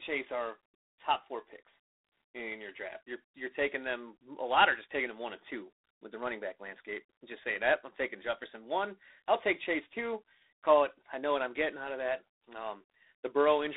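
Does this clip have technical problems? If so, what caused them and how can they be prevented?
Yes. The speech is degraded by G.726 ADPCM coding for its whole length. Nothing above 3.9 kHz gets through, and the line band runs from 300 Hz to 3.7 kHz. A harsh, rasping hiss rides on the speech and rises and falls with its level. That roughness fits the 24 kbit/s mode, where each sample keeps only 3 bits of prediction error. To prevent it, use 32 kbit/s or a wideband codec.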